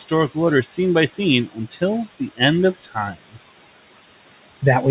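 Noise suppressor artifacts run through the whole clip: the suppressor is pulling the room noise down by about 18 dB frame by frame, so the background dips between phrases and swells back under the speech. That noise sits about 19 dB below the speech, and the call codec tops everything out around 4 kHz.

Speech cut by the noise suppressor shows up three times. At 0.63 to 0.78 s, some soft speech gets treated as noise and pulled down by as much as about 10 dB. From 1.48 to 1.82 s, just before "the end", the drop reaches about 15 dB. From 2.75 to 2.96 s, right after "the end", it reaches about 13 dB. Each time roughly a tenth of a second sounds swallowed and faint.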